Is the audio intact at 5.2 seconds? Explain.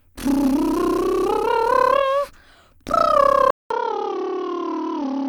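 No. From 3.50 s to the end, the music goes dull and narrowband, with nothing above 6.2 kHz, a few dB quieter, and carrying a new noise floor, after a 200 ms gap. This is likely an input switched to a poorer device mid-recording.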